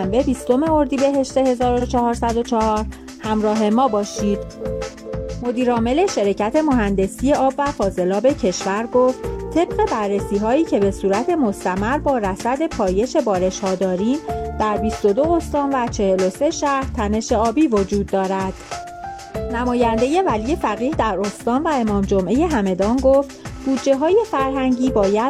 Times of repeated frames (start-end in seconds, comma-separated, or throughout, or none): 1.77-1.82